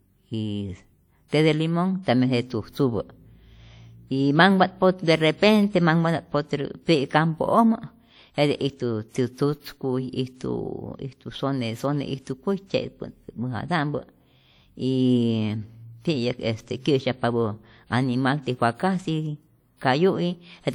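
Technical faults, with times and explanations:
Throughout, WMA compression: ringing, washy speech with hiss that breathes with the signal, likely from a transform codec at a low bitrate, consistent with roughly 48 kbps.
1.28–1.33 s and 2.03–2.07 s (just before "tambien jete tzujtzupä"), pre-echo: noise spread across each transform block leaks ahead of the attack, giving about 40 ms of hiss and a smeared onset.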